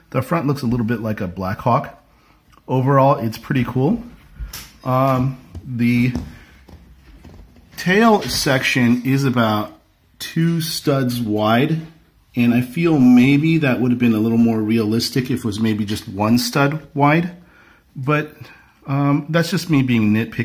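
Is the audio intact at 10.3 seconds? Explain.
Yes, the audio at 10.3 seconds is intact, with no dropout, click, distortion or other fault at that moment.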